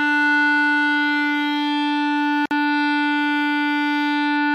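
At 2.46 s the music drops out for about 54 ms, a gap at a join of encoded pieces where encoder start delay and end padding were left untrimmed. The waveform shows a flat silent block with smeared edges, and the spectrogram shows an empty vertical strip before the sound resumes where it stopped.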